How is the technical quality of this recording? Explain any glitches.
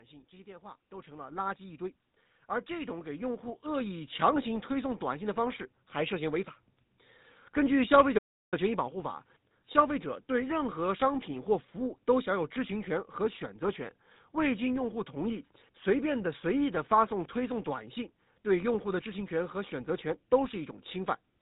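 The recording has clear technical problems: a heavily coded, band-limited sound throughout, two gradual level swells near the start, and one brief dropout.

Throughout the clip, the speech has a buzzy, gravelly roughness and sounds muffled, with nothing above about 4 kHz. This is the signature of the GSM full-rate codec, which fits a 13 kbps stream. The codec models the vocal tract as a filter and excites it with a sparse, regularly spaced pulse train, discarding most of the excitation detail. That coarse reconstruction produces the grainy buzz, and the codec's narrow band removes the upper frequencies.

From 0.3 to 2.08 s, the level swells by about 7 dB, and from 2.66 to 5.9 s it swells again, by about 9 dB. The speech and the background rise together rather than the voice alone getting louder. This is automatic gain rising: the gain control judged the input too quiet and pushed its gain up gradually. 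Because the gain acts on the whole signal, the background noise climbs along with the speech over each ramp.

At 8.18 s the sound cuts out abruptly mid-flow and stays silent for about 0.34 s, until 8.54 s. This is a playback stall, likely caused by the player running out of buffered data or its audio thread being blocked. While starved, the output has nothing to play, so it falls silent until data flows again and playback resumes.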